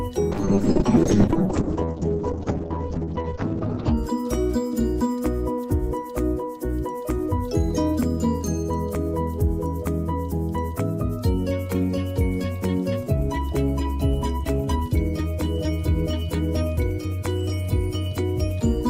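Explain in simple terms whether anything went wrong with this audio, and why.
From about 0.33 to 4.03 seconds the sound turns rough and muffled, losing its crisp top end. This is a call bitrate drop: the connection briefly had less capacity, so the audio was squeezed into far less data and the highest frequencies were cut away.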